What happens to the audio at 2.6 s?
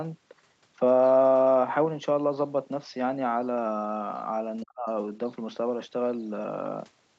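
Nothing goes wrong at 2.6 s; the speech carries on intact through that moment, with only the ordinary limits of the call path, such as nothing above about 8 kHz.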